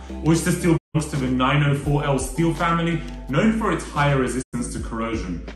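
At 0.76 to 0.96 s and again at 4.41 to 4.55 s, the audio drops out in a digital broadcast dropout: the receiver mutes on bad frames, fading out over about 20 ms. It then skips ahead, losing about 160 ms and then 96 ms, consistent with five and three missing frames.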